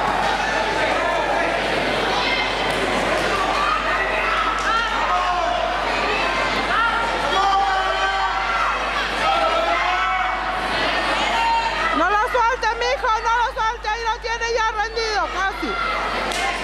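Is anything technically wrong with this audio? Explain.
Yes, there is mains hum throughout: power-line interference, likely from a ground loop, leaks in at 50 Hz, adding a steady low drone roughly 15 dB below the sound.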